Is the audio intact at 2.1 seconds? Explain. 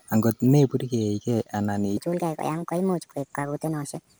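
No. At 2.1 s the speech falls inside a section at the wrong speed, from 1.97 s to the end. It runs 1.46 times too fast, likely from a wrong playback clock. Pitch rises roughly seven semitones, so it sounds high and hurried.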